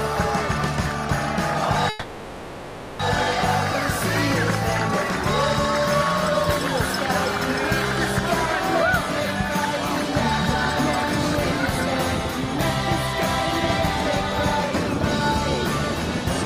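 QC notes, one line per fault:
1.89–3.01 s, call audio freeze: a fading buzz or hiss fills 1.1 s, then audio resumes intact, 1.1 s late; likely delayed packets emptied the jitter buffer.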